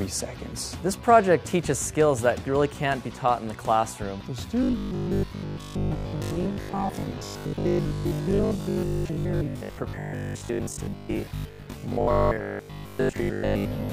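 From 4.63 s to 13.91 s the sound turns hard and metallic, with a steady 50 Hz buzz that stays fixed in pitch while it loosely tracks the rise and fall of the original audio. This is robotic sound from repeated short buffers, likely caused by new audio arriving too slowly, so playback loops the last 20 ms or so and skips real material. The 50 Hz buzz fits a repeat every 20 ms, and repeats fill most of this stretch.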